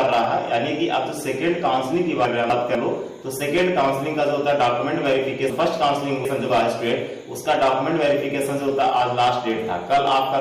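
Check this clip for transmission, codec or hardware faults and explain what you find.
Two out-of-order faults are audible. Chunks out of order, 2.25 to 2.75 s: one 250 ms chunk plays a chunk late, so the audio briefly jumbles across three hard joins. Chunks out of order again, 5.5 to 6.5 s: a 250 ms chunk lands three chunks late, giving a longer garbled stretch.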